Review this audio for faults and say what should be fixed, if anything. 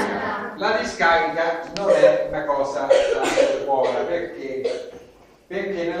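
Compressed frames skipped at 0.56 s and from 2.32 to 2.34 s. The decoder drops whole 23.2 ms frames, so the audio jumps ahead by about 50 ms (roughly two frames), then about 70 ms (around three). The waveform shows a discontinuity in the envelope; the spectrogram shows a vertical smudge and a sudden shift in content. Prevent this by verifying file integrity and transmitting with error protection or retransmission.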